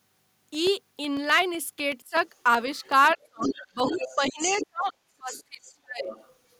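From 0.17 s right through to 6.55 s there's a steady tick every 0.125 s, roughly fifty of them. These are periodic USB or driver dropouts: something blocks the bus or driver on a fixed cycle, and each time about a millisecond of audio gets swapped for silence.

At 2.02 to 2.14 s the talker's speech dips by about 20 dB, which is likely speech suppressed in double talk. The canceller couldn't separate the talker from the loudspeaker echo and turned everything down. It happens again, much harder, from 3.15 to 6.09 s, with drops of about 35 dB and around two seconds affected.

Meanwhile the other side's voice is leaking through, likely residual echo the canceller missed. It's strongest from 2.75 to 4.67 s, only about 5 dB under the talker. Fainter scraps follow at 5.31 to 5.72 s (about 20 dB down) and 6.08 to 6.32 s (about 15 dB down).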